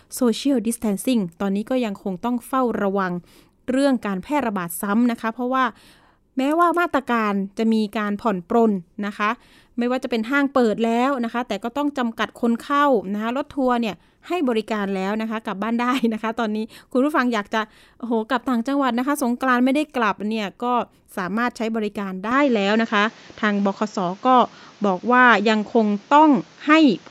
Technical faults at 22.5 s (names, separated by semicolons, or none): input switched to a poorer device